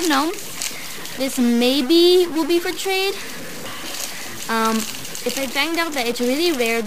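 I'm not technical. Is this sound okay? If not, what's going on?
No. From start to finish the sound has a harsh, buzzy roughness, and even the quiet gaps are filled with a noticeable hiss. This is likely a stuck bit: one digit in the digital signal stays fixed, pushing many values off by the same step.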